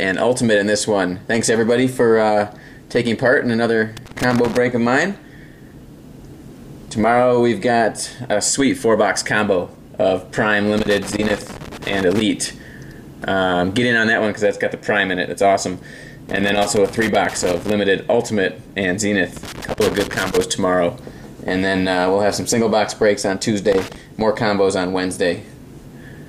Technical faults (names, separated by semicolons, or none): loose connector crackle